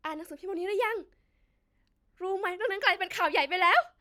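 Speech recording, with nothing technically wrong anywhere in it. No fault can be heard at any point in the audio.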